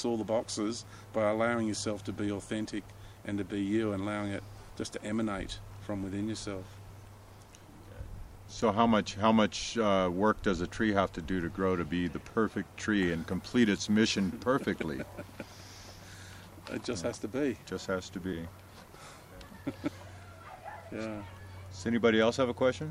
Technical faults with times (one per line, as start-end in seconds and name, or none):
8.35 audio missing between chunks